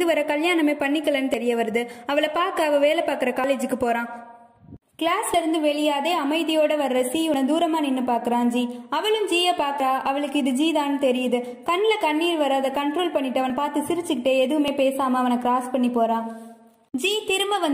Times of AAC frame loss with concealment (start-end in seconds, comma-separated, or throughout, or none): none